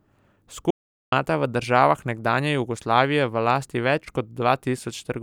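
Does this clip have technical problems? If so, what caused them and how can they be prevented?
Yes. There's an audio dropout to silence from 0.71 to 1.12 s, where the speech cuts to silence with no room tone for about 0.42 s. The likely cause is the input briefly dropping out while the recorder kept writing silence. Secure cables and connections, and check for stray mutes before recording.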